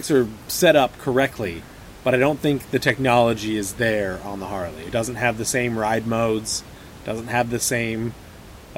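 No technical faults are audible in this speech recording; the only background is the room's own ambient noise, sitting about 20 dB below the speech and belonging to the recording itself.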